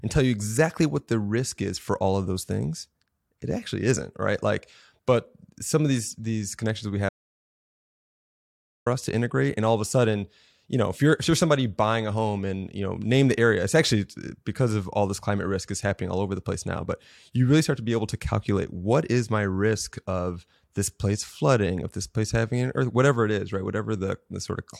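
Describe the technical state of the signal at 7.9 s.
Audio dropout to silence, running from 7.09 s to 8.86 s, so 7.9 s sits in the middle of a 1.77 s stretch of silence. The speech cuts off abruptly after "these these connections we" and resumes mid-flow with "us to integrate", with no room tone bridging the gap. The input was likely lost briefly, through a disconnection or mute, while recording carried on writing silence, so whatever was spoken there is gone.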